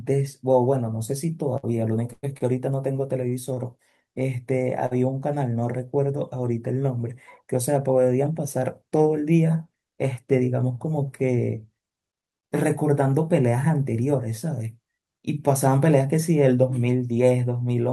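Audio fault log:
1.57–3.59 s, repeated stalls (stutter): seven gaps, 258 ms in total and the longest 101 ms, were filled by extending the preceding sound. The sound drags and stutters without skipping anything, unlike packet loss.
4.86–4.93 s, short stall from a late packet: one sound is held 48 ms too long while the buffer waits, then resumes from the same point. It is a single isolated hitch rather than a stuttering run.
10.26–10.70 s and 15.47–15.98 s, jitter buffer speed-up: the buffer trimmed pitch-period slices, about 50 ms and 40 ms, so the sound runs 9% and 7% fast at unchanged pitch, unlike resampling.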